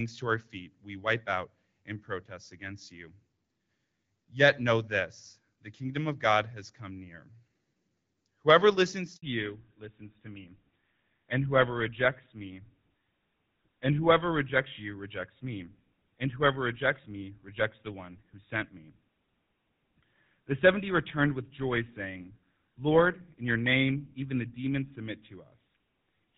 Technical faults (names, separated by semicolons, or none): handover gap; fallback to narrowband